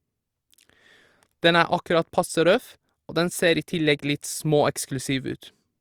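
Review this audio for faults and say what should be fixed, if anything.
No faults can be heard in this speech recording. Nothing needs to be fixed.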